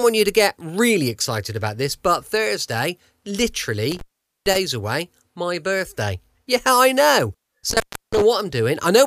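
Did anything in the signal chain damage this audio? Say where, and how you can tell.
Yes, an intermittent contact in the analogue wiring cut out the speech twice: from 3.91 to 4.56 s, with the line open for about 449 ms, and from 7.70 to 8.22 s, open for about 325 ms. A loose plug or cable briefly broke the connection, so each gap is framed by contact crackle and holds faint hiss. A network or buffer dropout would instead leave clean digital silence or a concealment smear.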